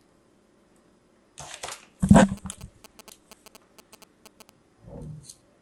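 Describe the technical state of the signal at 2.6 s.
GSM signalling bursts run from 2.14 to 4.50 s. A nearby phone's radio bursts are rectified, giving galloping ticks and 217 Hz buzzes, roughly 20 dB below the sound.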